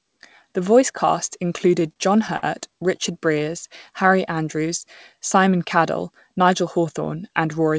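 Just after "voice cast", from 1.58 to 2.44 s, the speech falls into repeated stalls (stutter). Packets reached the receiver late, and its jitter buffer ran dry six times. Each time it bridged the gap by continuing the last sound, about 123 ms in all and 14% of that span, with the longest fill at 57 ms. No speech is lost. The passage drags and catches in a halting rhythm.

From 3.33 to 4.34 s a jitter buffer slow-down takes place. With the buffer low, the receiver rebuilt its reserve by repeating individual pitch periods and pause fragments in quick succession. This added 53 ms and played the stretch at 96% speed with the pitch unchanged, so sounds are slightly drawn out and the delivery feels a touch sluggish.

From 6.35 to 6.85 s the opposite happens: a jitter buffer speed-up. The buffer held more audio than its target, so the receiver trimmed short runs of one or a few pitch periods, removing about 40 ms. 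That half-second plays at 107% speed at the same pitch, and the speech sounds briefly hurried. Throughout, nothing is present above 8 kHz, consistent with a G.722 call path at around 64 kbps.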